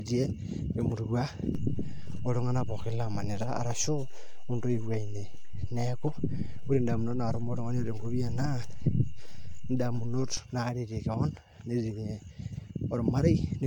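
Throughout, the speech sounds swirly, smeared and hollow, with blurred attacks and nothing above 19.2 kHz: likely generation loss, from roughly three passes through AAC-LC at a rate that fits 96 kbit/s. At 1.55 s a low thump marks a DC step, where the zero line jumps and holds. A second thump comes at 10.37 s when it steps back.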